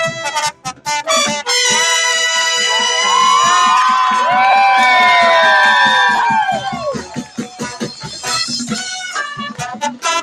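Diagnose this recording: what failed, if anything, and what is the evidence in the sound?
Call processing. A noise suppressor applied to music or sounds runs for the whole clip. Its gain swings by around 10 dB. Attacks pass through while held sound and decays get pulled down. The level pumps and thins. A speech-tuned suppressor is treating steady content as noise.

Call processing again. There are three clear spots of sound cut by the noise suppressor: 0.51 to 0.87 s, dipping about 17 dB, then 6.59 to 8.29 s and 8.7 to 10.05 s, each about 16 dB. Sustained and fading material sinks. Tails end early.

Bluetooth link. Lost LE Audio frames appear twice. At 4.51 to 4.53 s, 15 ms drops out, which fits two 7.5 ms frames. From 6.15 to 6.23 s, 45 ms is lost in short gaps over 75 ms, the longest run near 20 ms. The LC3 decoder fills each gap by reusing the last spectrum with random signs. Tones smear into noise there.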